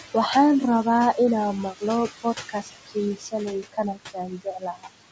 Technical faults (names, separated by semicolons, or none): noise suppressor artifacts; speech cut by the noise suppressor